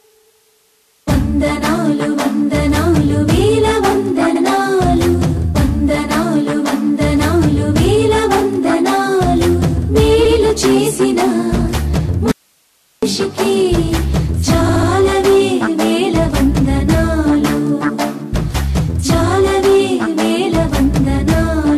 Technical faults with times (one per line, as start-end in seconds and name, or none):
4.34-4.41 repeated frames
10.24-10.36 repeated frames
12.31-13.03 audio dropout to a faint residue
14.68-14.89 repeated frames